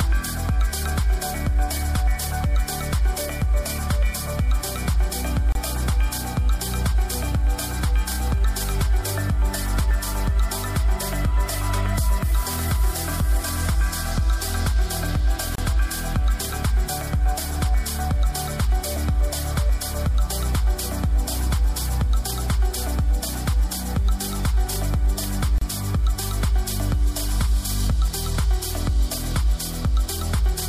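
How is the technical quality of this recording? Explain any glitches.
The recording has one recurring glitch: brief silences where separately encoded pieces of audio were joined, a gap at a join of encoded pieces. These occur at 5.52 s (28 ms), 15.55 s (31 ms) and 25.58 s (31 ms), exactly 10 s apart. Each piece carried the encoder's start-up delay and a padded final frame into the join. Continuous sound drops to silence with smeared edges, then resumes exactly where it left off. That regular spacing, and the fact that no sound is lost, set it apart from random dropouts.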